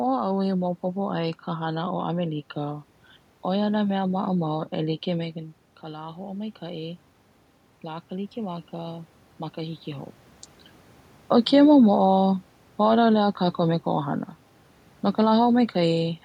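Right after "ʻoe na mea", from 4.52 to 7.08 s, there's automatic gain rising: the talker drifts away around 5 s, the input drops about 11 dB, and the gain control slowly pushes up by about 4 dB, so voice and room noise swell together. It happens again from 7.84 to 10.21 s, this time about 3 dB against the same 11 dB drop, before the talker moves again around 10 s.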